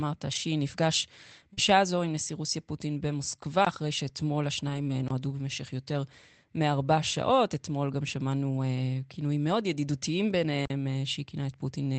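Packets went missing in transit on this speech recording, which passed through an Opus call path whose top end stops near 8 kHz and whose coding grain fits a rate around 24 kbps. At 0.31 to 0.37 s, and again at 4.69 to 4.91 s, the lost packets were recovered as lost packet rebuilt from error correction. Each following packet carried a low-bitrate spare copy of the missing one, and the decoder played those copies instead of leaving a hole. The sound therefore runs on without a gap but turns coarser and noisier for about 40 ms at the first spot and a longer 120 ms at the second, which points to roughly two and six lost packets.

At 1.53 to 1.59 s a 40 ms stretch arrived too late. The receiver handled it as short concealed packet loss, extending the preceding sound for about 36 ms and then crossfading back, which is heard as a brief smeared wobble. Its tail at 1.57 to 1.59 s was patched from an error-correction copy, so the last part of the moment sounds rough rather than smeared.

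Near the end, at 10.65 to 10.70 s, a block of digital silence appears. The output buffer was likely not filled in time, so about 46 ms of samples became zeros, a length that fits a 2048-sample block. The sound drops to dead silence and returns with no fade, leaving a short hole.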